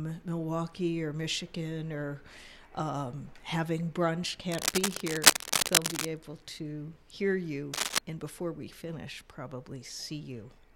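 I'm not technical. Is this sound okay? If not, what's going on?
No. Cable scratch noise at 4.52 to 6.05 s and 7.73 to 7.98 s: loud scratchy rustling over the sound, likely a worn cable or plug being moved so its connection flickers.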